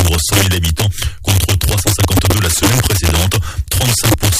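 The audio suffers from integer overflow throughout. Loud peaks are pushed about 2 dB past the integer limit. They wrap to the opposite sign instead of being held. A small share of samples flip across the full range, producing violent cracks far harsher than clipping.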